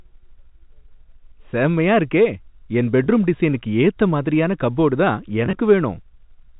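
At 3.04 s and again from 5.45 to 5.57 s, packet loss with pitch repetition: missing audio was bridged by repeating the last pitch period, producing a brief held buzz. Spectrograms show frozen, evenly spaced harmonics; the G.711 telephone band stays cut at 4 kHz.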